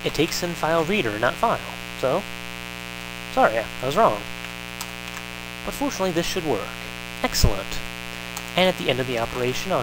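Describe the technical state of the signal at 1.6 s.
At 1.6 s the signal carries mains buzz, present throughout the clip: sharp switching spikes at twice each 60 Hz cycle add harmonics reaching several kilohertz, giving a raspy buzz sitting fairly high relative to the sound, unlike smooth hum's low, pure tone.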